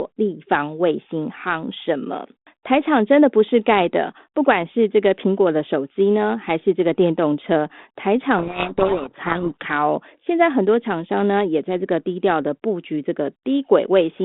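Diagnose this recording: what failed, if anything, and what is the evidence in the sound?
A codec payload misread at the codec stage, 8.38 to 9.65 s: the speech is buried in harsh distortion because the decoder takes G.726 code words in the wrong bit order. A spectrogram shows dense noise smearing formants up to 3.6 kHz; the waveform turns jagged.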